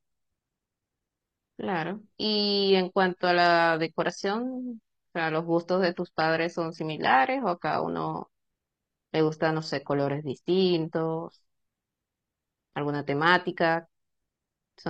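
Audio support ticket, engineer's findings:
Speech drops abruptly into a swirly sound with more codec artefacts at 1.25 s and snaps back at 13.25 s. Component: adaptive stream at a lower bitrate, consistent with a step down from around 96 kbit/s AAC to roughly 20 kbit/s HE-AAC. Seamless switch with no gap, unlike packet-loss dropouts.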